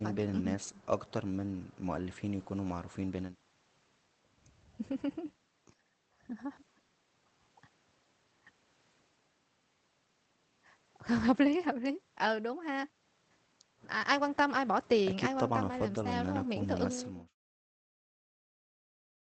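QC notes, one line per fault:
No faults found; the speech carries the call codec's band limit near 8 kHz and fades out smoothly to silence by 17.36 s.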